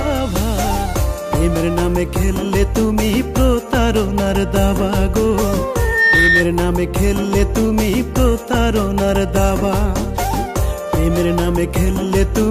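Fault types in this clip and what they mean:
Loudspeaker feedback squeal: the microphone hears its own loudspeaker and the loop gain exceeds one at 1.8 kHz, so that tone swells over about a third of a second, peaking around 5 dB above the sound; spectrograms show one bright horizontal line, waveforms a rising envelope.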